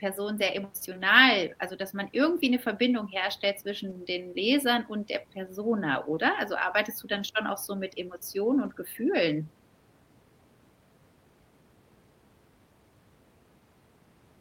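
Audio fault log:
0.43–0.45 s, 2.37–2.39 s, 3.89–3.91 s, 7.15–7.21 s and 8.65–8.71 s, lost packet rebuilt from error correction: packets went missing, and the decoder played the low-bitrate copy carried by the next packet. There is no gap, but the rebuilt stretches sound grainier and noisier. The first three events last 20 ms each, which fits a single lost packet. The first sits just before "emotional also dass man" and the second just after it. The last two last 40 ms each, which fits two packets in a row. The one at 7.15 s falls between "arbeitest du" and "schon auch so mit".
3.93–3.97 s, short concealed packet loss: about 20 ms of audio arrived too late to use, and there was no redundant copy to fall back on. The receiver extended the preceding speech for about 15 ms, continuing its pitch or shaped noise, and then crossfaded back into the real signal. This coming so soon after the rebuilt packet at 3.89 s, the result is a brief smear or wobble right there.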